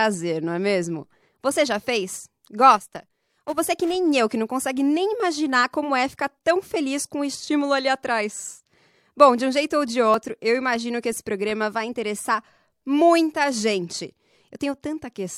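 A speech clip with a single tiny skip at 10.14 s where roughly 11 ms of sound drops out and the waveform jumps abruptly. It comes from an overlap between stream segments: two segments' time stamps claimed the same stretch, and the player trimmed that stretch away even though the audio was never actually duplicated.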